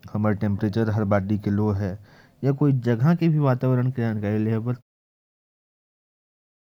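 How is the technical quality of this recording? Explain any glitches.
No glitches or faults audible.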